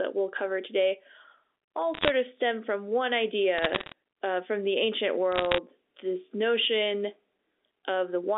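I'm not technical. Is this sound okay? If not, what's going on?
No. There are three bursts of crackle at 1.94 to 2.10 s, 3.58 to 3.92 s just before "uh from the ancient", and 5.32 to 5.58 s just before "this notion". They're bit errors on a digital phone line: a few flipped bits corrupt single samples, and those that hit a high bit click sharply.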